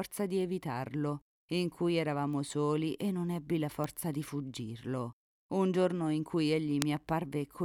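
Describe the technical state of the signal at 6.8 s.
At 6.82 s there is a bit error spike. A flipped bit in memory or on a digital link throws the waveform off by a power of two, then it snaps straight back. The jump lasts only a few samples, consistent with a run of three. It peaks at about -7 dBFS. It sounds like one sharp, bright tick. Its energy is spread across the spectrum. It bears no relation to the surrounding sound.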